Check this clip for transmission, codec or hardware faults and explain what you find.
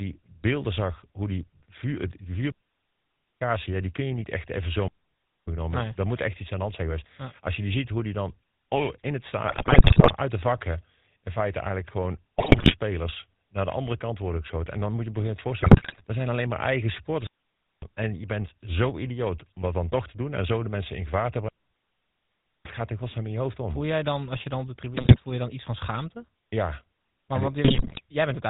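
Three separate problems are in here: GSM full-rate coding across the whole speech recording, four digital wireless dropouts, and five bursts of GSM bit errors.

The GSM full-rate codec damage runs start to finish and it's plainly audible. The codec models the vocal tract as a filter and feeds it a coarse pulse excitation that keeps only every third sample, with nothing passed above 4 kHz. That gives the voice its dull, band-limited, buzzy-gravelly texture. The character fits the old 13 kbps full-rate codec.

The digital wireless dropouts are four clean holes of near silence: 2.52 to 3.41 s (about 0.89 s, between "zag hoe die die" and "ja die kun je"), 4.88 to 5.48 s (0.6 s), 17.27 to 17.82 s (0.56 s), and 21.48 to 22.66 s (1.17 s, between "mensen in gevaar te" and "gaat er godsnaam in"). Each time the link lost too much data and the receiver muted with a tiny fade, so there's no noise burst on either side.

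The GSM bit errors come in five bursts: 9.48 to 10.13 s (after "dan oh in het", before "uit de vakken in"), 12.38 to 12.73 s, 15.6 to 16.02 s, 24.95 to 25.21 s and 27.64 to 28.01 s. Roughly 5 to 7 percent of bits flipped before reaching the decoder, corrupting filter, pitch and gain values frame by frame. You hear it as squawks, pops and a gargling break-up of the voice.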